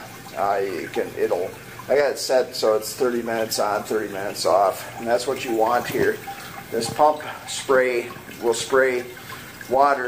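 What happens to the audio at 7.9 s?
Nothing goes wrong at 7.9 s; the audio plays through that moment intact, with no dropout, click or other fault.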